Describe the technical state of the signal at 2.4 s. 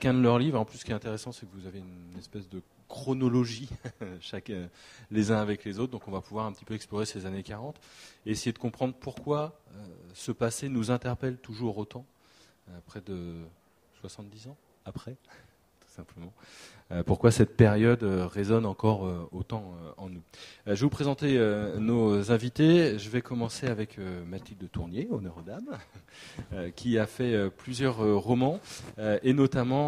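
At 2.4 s the signal is intact, with no audible dropout, clipping, glitch or other technical fault.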